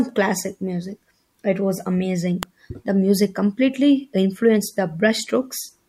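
An electrical switching spike at 2.43 s, right after "was amazing", is a sharp snap peaking around -5 dBFS laid over the speech, likely from a nearby switch arcing into the audio line.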